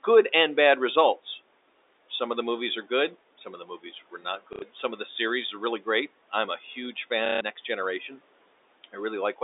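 Speech cut by the noise suppressor, from 4.11 to 4.84 s: the suppressor mistook parts of the speech for background and pulled them down with the room noise, by up to about 13 dB, leaving about a fifth of a second of faint, swallowed sound just before "of the series are".

Packet loss with the last packet repeated, at 4.53 to 4.62 s (90 ms) and 7.26 to 7.41 s (150 ms): the receiver replayed its last packet until fresh audio arrived. Each gap becomes a brief robotic stutter whose buzz suggests roughly 30 ms packets.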